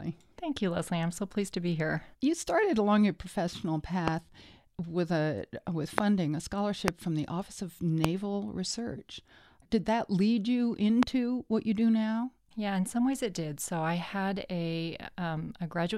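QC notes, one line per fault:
4.08–4.10, 5.98–6.00, 6.88–6.90, 8.04–8.06 and 11.03–11.05 s, loud pop: five sharp single pops, each about 20 ms and about 20 to 25 dB above the speech, after "started along your professional" and "with a with", and before "from the", with speech continuing underneath. Each is likely a brief voltage pulse from a plug, switch, static or driver glitch added to the signal.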